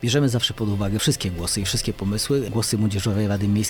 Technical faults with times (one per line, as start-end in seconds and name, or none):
none